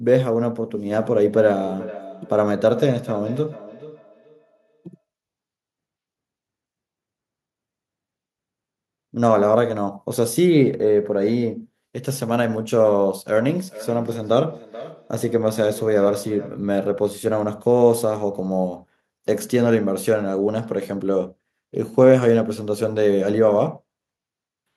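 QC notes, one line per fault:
1.03–5.04 s and 13.37–16.75 s, feedback echo between two devices: the speech comes back about every 400 ms, peaking about 16–17 dB below the direct sound. Another device's speaker is feeding this mic, and the local echo canceller can't remove playback it never produced.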